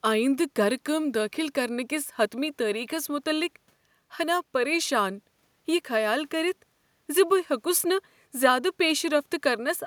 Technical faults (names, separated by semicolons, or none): none